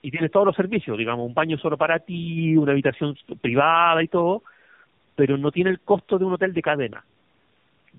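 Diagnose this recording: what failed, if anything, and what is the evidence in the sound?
Codec stage: tandem speech coding. The speech sounds rough, muffled and warbly throughout, with nothing above 3.6 kHz. Each low-rate coder, likely G.729A then AMR-NB, re-encodes the previous one's degraded output.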